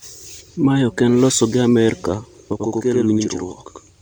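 Channel delay (doubling) begins at 2.53 s and runs to the end of the clip. One of the two original channels arrives about 93 ms late, a lag that fits a 4096-sample buffer, and when both are folded into mono the delayed copy does not blend in. Instead the speech is followed by a second copy at the same level, heard as a doubled voice or a single slap echo trailing each syllable.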